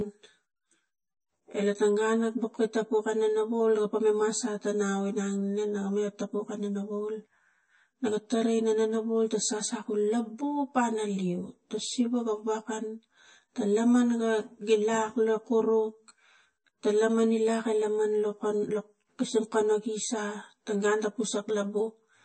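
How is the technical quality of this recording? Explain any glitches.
The recording is plainly impaired throughout by two faults.

Channel delay (comb filtering), throughout: one channel runs roughly 10 ms late before mono summing, cancelling at evenly spaced frequencies from around 40 Hz, so the speech sounds coloured and comb-like.

MP3 compression, throughout: plainly audible watery, swirly artefacts and nothing above 8.3 kHz, likely from MP3 encoding at a low bitrate near 32 kbps zeroing weak frequency lines.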